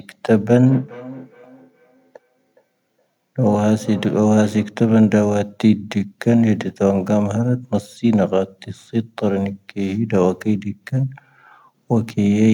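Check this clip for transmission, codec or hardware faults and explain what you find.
One fault stands out: feedback echo between two devices, from 0.65 s to 4.77 s. The speech returns roughly every 400 ms. The repeats peak at about 20 dB below the direct speech. Two devices in the same room are on the call. One plays back what the other's microphone sent. That microphone captures it again. Each device's echo canceller only removes its own playback, so this loop passes through untouched.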